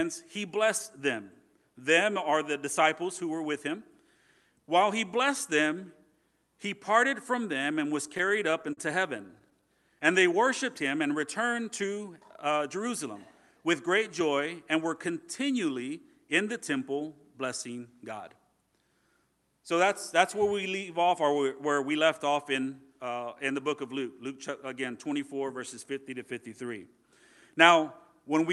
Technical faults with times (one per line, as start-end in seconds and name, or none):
8.07-8.79 repeated stalls (stutter)
9.17-9.64 repeated stalls (stutter)
25.91-26.49 jitter buffer speed-up